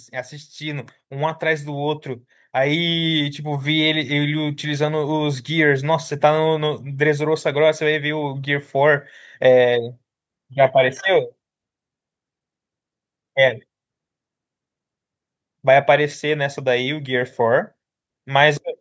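Automatic gain rising runs from 0.12 to 5.51 s: the call's gain control judged the speech input too quiet and lifted its level step by step, by about 10 dB, so voice and background noise swell together slowly rather than jumping.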